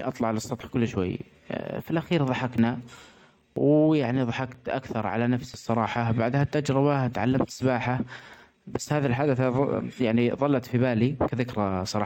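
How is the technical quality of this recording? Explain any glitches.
The recording has a regular glitch: eight overlaps between stream segments, at 0.61, 1.59, 2.58, 3.56, 4.55, 5.54, 6.53 and 7.51 s. The first falls between "اطلع علي" and "كل شوي". The glitches arrive almost exactly once per second, which points to 1 s segments whose overlapping ends are trimmed. Each trim removes 6 to 19 milliseconds of real sound, causing a tiny skip. The steady timing and missing audio, rather than silent gaps, set it apart from random packet loss.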